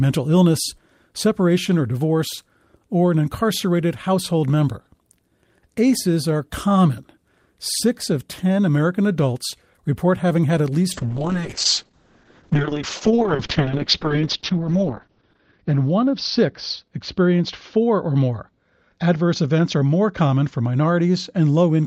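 At 10.94 s, just after "report having had at", a call bitrate drop sets in and lasts to the end of the clip. The encoder's rate falls from 32 kbps to 6 kbps, bottoming out for about 3.9 s, and the coded bandwidth shrinks from 20 kHz to 6 kHz. The speech turns muffled and rough, with a watery coarseness. On a spectrogram, energy above 6 kHz abruptly disappears, leaving a flat ceiling, while the waveform's fine detail looks smeared.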